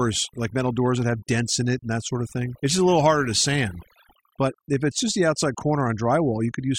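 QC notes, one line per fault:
Throughout, overdone noise removal: the denoiser's pushed way too hard, so any frequency band sitting near its noise estimate gets pulled down or switched off, taking the quieter bits of speech along. You get near-silent gaps full of twinkly specks.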